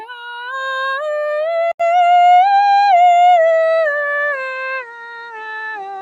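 A noise suppressor applied to music runs through the whole clip. A processor built for speech keeps treating the sustained parts of this music as noise, so held notes and decay tails keep dipping and recovering, with the level swinging by roughly 5 dB. Sound cut by the noise suppressor is clearest from 0.06 to 0.39 s and again from 4.83 to 5.34 s. In these spans the suppressor pulls the music down by about 12 dB and about 11 dB respectively, so the lingering material sinks and its decay ends early while sharper onsets come through. At 1.72 s there is an 80 ms silence, and from then to the end the sound passes through a narrower band. A new noise floor sits roughly 30 dB under the music while the overall level stays much the same, which is likely an input switched to a poorer device in mid-recording.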